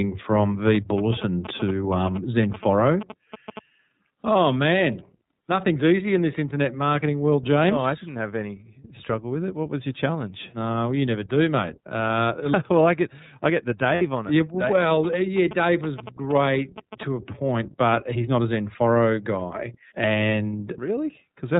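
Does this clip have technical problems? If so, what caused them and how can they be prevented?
Yes. Three kinds of fault can be heard.

The iLBC codec shapes the whole clip. This narrowband codec codes each 30 ms frame's excitation on its own and passes nothing above 4 kHz, so the speech sounds clear but slightly rough and synthetic, and the damage is plainly audible. The roughness fits the 13.33 kbps mode. On a spectrogram, all energy stops at a hard ceiling near 4 kHz for the full length. Using a wideband codec such as Opus where the network allows would prevent this.

GSM signalling bursts run from 0.66 to 3.59 s and again from 14.66 to 17.03 s. A nearby 2G phone exchanging signalling with the network emitted radio bursts that the audio circuit rectified, giving a galloping dit-dit-dit of short buzzes repeating at about 217 Hz, around 10 dB below the speech. A spectrogram shows vertical stripes with harmonics stacked at 217 Hz spacing, and the waveform shows regular spiky clusters. 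Keeping phones away from the microphone and cabling, or using shielded leads and RF-filtered inputs, would prevent it.

Lost iLBC frames cause a brief fault from 13.94 to 14.02 s. Packets went missing, and the decoder covered about 60 ms, which fits two lost 30 ms frames, by repeating the last pitch cycle mixed with noise. This gives a short held, slightly buzzy vowel before the speech recovers almost immediately, since each frame decodes independently. A spectrogram shows flat, unchanging harmonic bands over that span, and the waveform shows a repeating cycle overlaid with noise. A jitter buffer or forward error correction on the network path would prevent it.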